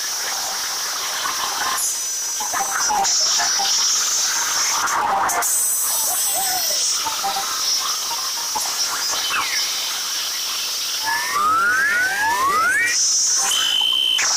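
A filter restarted on every block runs throughout the clip. The filter discards its internal state at each block boundary and starts again from silence, so every block opens with a small transient. Those transients recur 200 times a second, which fuses into a steady 200 Hz buzz rather than separate ticks. The buzz rises and falls with the level of the sound, growing louder in stronger passages and receding in quieter ones.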